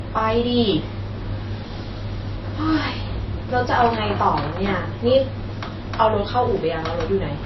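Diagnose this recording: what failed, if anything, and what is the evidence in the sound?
The failure sits at the codec stage and runs through the whole speech clip: the sound is plainly damaged by lossy coding, with nothing at all above 5.8 kHz. The likely cause is MP3 compression at a low bitrate, which fits roughly 24 kbps. Starved of bits, the encoder discards the treble at a fixed cut-off and drops weak frequency lines. On a spectrogram this shows as a hard horizontal ceiling at 5.8 kHz, with patchy, gappy energy beneath it.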